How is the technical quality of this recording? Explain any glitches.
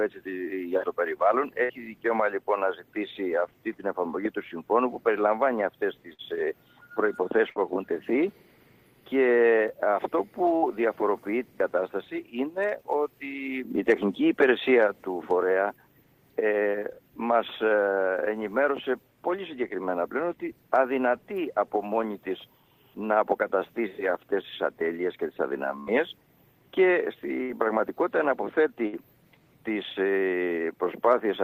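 The recording has seven short dropouts from a burst of packet loss, at 1.63, 6.13, 7.5, 10.56, 25.80, 27.43 and 28.87 s. Each time, a run of packets failed to arrive in time. The receiver bridged the hole for about 55 to 70 ms by stretching the last sound it had and letting it fade, which gives a brief held buzz or fading hiss. Playback then jumps ahead, having lost about 60 ms of audio.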